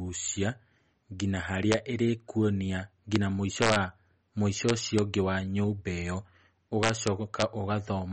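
Throughout, the speech sounds plainly watery and swirly, with nothing above 8.4 kHz. This is likely MP3 compression at a low bitrate, which fits about 35 kbps.

Integer overflow appears at 1.72 s, 3.16 s, 3.62–3.76 s, 4.69–4.99 s and 6.83–7.42 s. Peaks pushed up to about 2 dB past the integer limit wrap to the opposite sign, giving cracks sharper than clipping.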